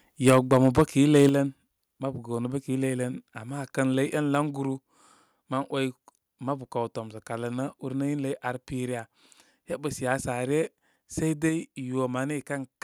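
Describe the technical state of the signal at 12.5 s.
At 12.5 s the speech signal is intact, with no dropout, distortion, glitch or other fault present at that moment.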